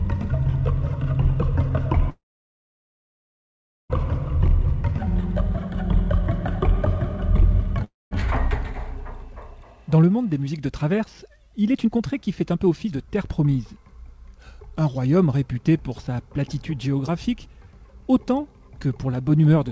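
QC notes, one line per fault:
2.10–3.92 s and 7.84–8.13 s, call audio freeze: packets were likely held up and the jitter buffer ran dry. A brief fading tail gives way to silence for about 1.72 s and 0.21 s. The sound then resumes where it stopped, nothing lost, and everything after is later.
10.02–13.48 s, jitter buffer speed-up: the buffer held excess audio and shed roughly half a second in repeated pitch-period cuts. The sound runs at 116% speed and hurried, at unchanged pitch.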